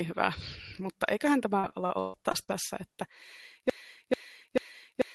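Speech, and it runs into trouble twice. From 1.59 to 2.50 s there's repeated packet loss, giving that choppy, robotic sound: six separate holes, the longest about 143 ms, each one papered over by stretching the last bit of sound. About a third of that stretch is concealment rather than real audio, so it loses pieces. Then at 3.70 s it falls into a broken-record loop, the same roughly 440 ms fragment repeating back to back right through to the end of the clip. The likely cause is a stalled player or stream that kept re-sending the last chunk it had, so whatever should have followed is gone. Underneath it all you can hear the call path's Opus coding, with its coding noise and the top end rolled off at about 12 kHz, which fits a bitrate of around 20 kbps.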